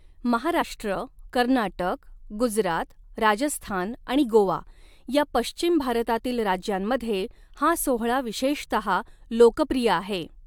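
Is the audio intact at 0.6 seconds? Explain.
No, compressed frames are skipped at 0.61 s, jumping about 20 ms ahead, heard as an abrupt skip at the join.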